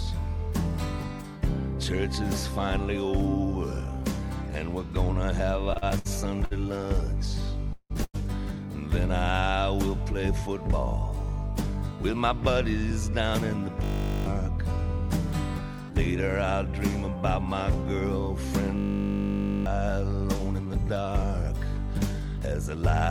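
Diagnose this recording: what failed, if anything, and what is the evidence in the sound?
Network delivery into the receiver's jitter buffer failed first. Between 5.71 and 8.16 s packets arrived too late or too slowly, and the buffer ran dry eight times. The receiver bridged each gap by extending the last sound, so the passage drags and stutters in repeated stalls, with 465 ms of filled-in audio and the longest hold at 170 ms. Nothing is actually lost. The stretched audio covers about a fifth of that span.

Afterwards the jitter buffer was holding more audio than its target, so it shed the excess through a jitter buffer speed-up from 12.91 to 22.83 s. It trimmed short pitch-period slices over and over, removing roughly a tenth of a second in total. Playback runs at 101% with the pitch unchanged. The effect is a slight hurrying, too small to stand out on its own, but it is spread across the whole latter part of the clip.

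A system hang loop also hit the playback driver or buffer stage twice: 13.84 to 14.26 s, and 18.78 to 19.66 s. The host froze while the sound hardware kept replaying the same 20 ms of its ring buffer, about twenty times in the first event and over forty in the second. That exact 20 ms repetition produces a steady 50 Hz buzz in place of the real audio. Roughly 0.4 s and about a second of sound are lost.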